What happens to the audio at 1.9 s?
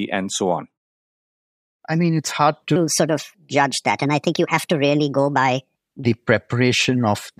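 Nothing goes wrong at 1.9 s: there is no dropout, click, distortion or level change.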